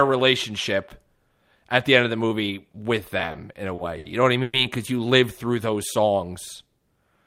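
From 3.17 to 4.06 s, just after "of the movie with", packets reached the receiver more slowly than they were played, so the jitter buffer kept running dry. The result is repeated stalls (stutter): six short gaps, the longest 60 ms, are filled by continuing the last sound, about 170 ms in all, so the speech drags and hiccups while nothing is lost.

At 4.42 s, after "know what I", packets were likely held up in transit, leaving the buffer empty for a call audio freeze. The last sound is stretched into a 110 ms buzz or hiss with no silence, then speech resumes where it stopped, now running 110 ms later.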